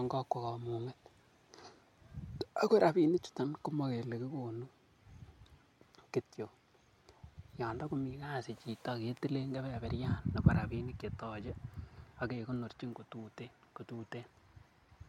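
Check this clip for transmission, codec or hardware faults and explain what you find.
Nothing stood out on listening to this recording.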